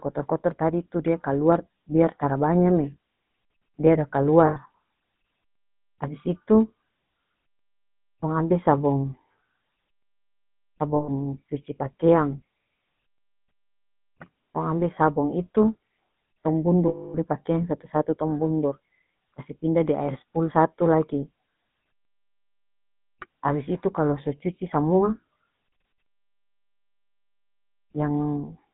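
Throughout, the speech carries the gravelly buzz of the GSM full-rate codec, whose coarse pulse excitation and vocal-tract model suit a 13 kbps coder. A spectrogram shows energy confined to about 150 Hz to 3.7 kHz, with smeared, grainy harmonics.

Lost GSM frames occur at 4.46 s (100 ms), 10.96 s (120 ms) and 16.88 s (260 ms). Each gap is filled by repeating the last good frame, giving a metallic ring. The waveform shows a held smear.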